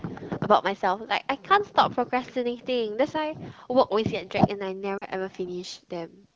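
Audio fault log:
4.98 to 5.05 s, lost AMR speech frames. For about 40 ms the speech goes smeared and thin, then briefly dims. The length points to two consecutive 20 ms frames corrupted on the radio path. With no valid data, the decoder repeated the last good pitch and vocal tract settings at falling gain. That stretches the preceding sound into a short warble. In this AMR-WB stream the fade is quick, so the gap stays brief. Speech then resumes weak for a moment before recovering.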